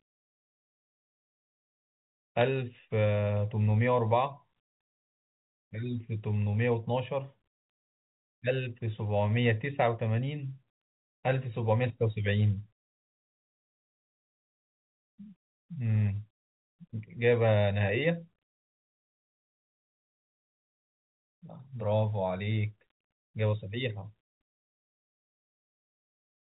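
At 2.41 s, and again from 22.88 to 22.92 s, bit errors on a digital phone line corrupt a few individual samples. Roughly one bit in five hundred flips, so each hit sample jumps to a wrong value. The result is sharp ticks and a short burst of crackle over the G.711 telephone sound, which stays limited to 4 kHz. In the waveform they show as isolated single-sample spikes. In the spectrogram they appear as thin vertical lines across the whole band.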